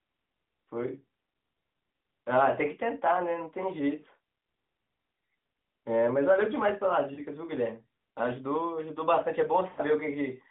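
At 7.14 s the speech briefly smears and dips for about 40 ms, and at 9.70 s a longer, drawn-out warble lasts about 80 ms, to 9.80 s, fading before the voice returns weak or rough. These are lost AMR speech frames. Corrupted frames failed their check, so the decoder repeated the last good pitch and vocal-tract settings at falling gain. The durations fit two and four lost 20 ms frames in this narrowband, 12.2 kbps line band of 200 Hz to 3.6 kHz.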